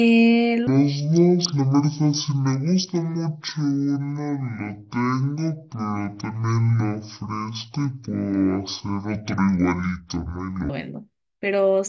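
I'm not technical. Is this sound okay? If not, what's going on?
No. From about 0.67 s to 10.7 s there's a wrong sample rate fault. The speech plays at half speed and a full octave lower, slow and deep, which fits a 32 kHz recording being played back at 16 kHz without conversion.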